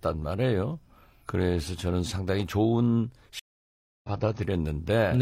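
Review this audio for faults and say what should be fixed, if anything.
Stream reconnect, 3.39 to 4.10 s: the speech stops for about 0.65 s while the player drops its connection and reconnects. A fresh decoder then resumes mid-stream roughly half a second later, so a stretch of speech is skipped and the first frame comes back faded in. To prevent it, give the player a larger network buffer and have it resume from the exact stream position after reconnecting.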